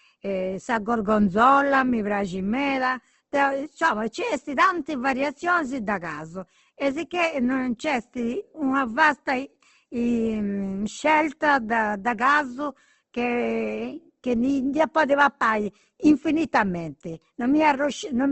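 Opus compression is the likely cause of the damage heard throughout the speech, from start to finish. Nothing sounds above about 8.2 kHz, so the top is cut to wideband, which fits a low rate near 16 kbps. Short of bits, the encoder keeps each band's energy but refills detail by folding lower bands or inserting noise, pointing to its music mode. Voiced sounds therefore come out plainly rough, grainy and noisy rather than swirling.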